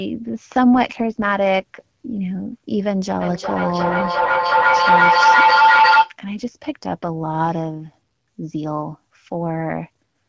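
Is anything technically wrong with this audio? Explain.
Yes, there are two faults.

An AMR rate drop runs from 0.74 to 2.14 s. A weak radio link made the network lower the AMR-WB rate and spend bits on error protection, fitting a step from 12.65 to 8.85 kbit/s. The speech turns rougher and more synthetic, with no gap or loss of bandwidth.

A feedback howl runs from 3.2 to 6.17 s. Two devices in the same room shared the call, so each trip from loudspeaker back into microphone added gain. Instead of fading, the repeats, roughly every 0.4 s, build into a tone near 1 kHz that peaks about 8 dB above the speech.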